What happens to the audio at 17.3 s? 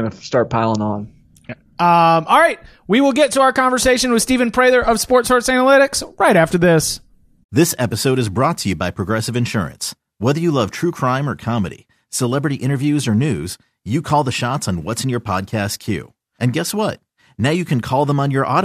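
Nothing goes wrong at 17.3 s; the speech there plays through cleanly, with no dropout, glitch or distortion at that moment.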